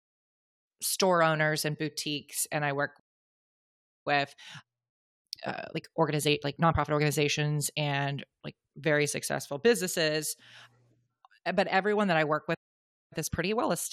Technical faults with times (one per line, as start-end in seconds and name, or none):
2.99-4.07 playback stall
4.07-7.07 time-compressed catch-up
12.54-13.13 playback stall
13.13-13.93 time-compressed catch-up